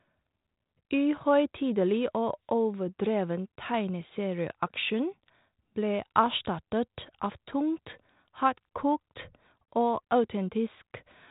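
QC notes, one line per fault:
The speech signal carries the light coding texture expected of G.726 ADPCM at 32 kbit/s, with its bandwidth held below 4 kHz, and shows no technical fault.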